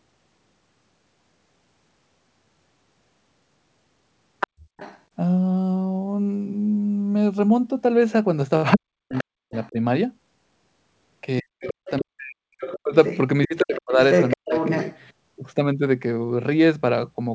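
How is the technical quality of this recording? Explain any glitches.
The recording is degraded by two linked echo-control faults during a call. Both come from a loudspeaker echo that was not handled cleanly. The audio tops out around 8 kHz, which fits a G.722 call path.

Other side's voice leaking through happens at 4.4 to 5.0 s, 8.72 to 9.68 s, 11.67 to 12.01 s and 12.59 to 15.0 s. A second, fainter voice sits under the talker. It is roughly 5 to 15 dB quieter, loudest in the first and last stretches. The likely cause is the far side playing on a loudspeaker and reaching the microphone. The echo canceller did not remove all of it.

Speech suppressed in double talk occurs at 8.76 to 9.78 s, 11.41 to 12.94 s and 13.47 to 14.55 s. Each overlaps a leak. The talker's voice is turned down, by roughly 40 dB at its deepest. The gaps add up to about 0.7 to 1 second per stretch. Both sides were likely talking at once. 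The canceller could not tell the talker from the echo, so it turned everything down.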